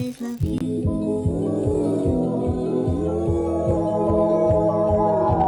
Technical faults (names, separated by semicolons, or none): unreliable data bit